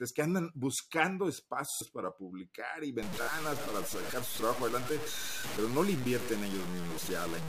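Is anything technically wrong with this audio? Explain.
Yes, there are two kinds of fault.

Repeated buffer, 1.72 to 1.81 s and again at 3.23 to 3.27 s. Fresh audio failed to reach the output in time, so the device replayed the chunk it already held. Each repeated piece is about 23 ms long, which fits a 1024-sample buffer. It plays four extra times in the first event and twice in the second, giving a rapid stutter with hard joins. About a tenth of a second of sound goes missing in the first event and about 50 ms in the second.

Low bit depth without dither, from 3.03 s to the end. The sound turns grainy and rough, with the distortion rising and falling along with the speech rather than sitting as a steady hiss. The error is only about 10 dB below the signal, so the grit is prominent. Quiet stretches break up or sputter between a few coarse steps. The likely cause is a signal reduced to very few bits, consistent with about 5, by plain truncation with no dither to smooth the rounding error.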